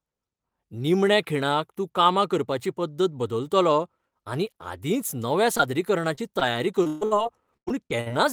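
Right after "आनी आदींच नव्या", at 5.57 s, a brief smear flickers through the sound, and the same small wobble returns at 6.15, 6.39 and 6.83 s. These are short concealed packet losses. Each time about 20 ms of audio never arrived in time, and the decoder bridged the hole by extending the preceding sound, following its pitch where voiced or as shaped noise where not, before blending back into the real signal.

From 6.87 to 7.03 s, straight after the last of those wobbles, the sound freezes into a held buzz or fading hiss, and a shorter version follows from 7.05 to 7.13 s. These are bursts of packet loss. About 140 ms and then about 60 ms of audio went missing in a row. The receiver kept stretching the last sound while turning it down, then jumped ahead, so the material in between is simply gone.

Between 7.57 and 8.09 s the audio turns choppy, with pieces missing. This is repeated packet loss. 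Four separate gaps, the longest about 97 ms, fall within this half-second. Each is patched by continuing the previous sound just before the next dropout arrives. Altogether roughly 220 ms is missing, and about 38% of the stretch is synthetic fill rather than real signal.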